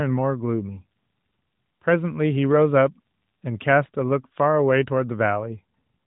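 At 3.86 to 3.89 s, AMR bit errors strike: around 5 percent of the weakly protected bits flip in a 30 ms span, which fits two 20 ms frames. Pitch and level hold, but the sound turns briefly hoarse and gargly. A spectrogram shows smeared, noisy energy below 4 kHz.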